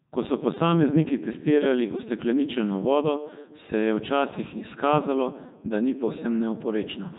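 The clip is speech passed through the Codec 2 vocoder throughout, with heavy damage. The voice is rebuilt from sine waves using only pitch, voicing, energy and spectral envelope, so it sounds robotic and buzzy. Nothing remains above 3.8 kHz, which fits Codec 2's 3.2 kbit/s mode.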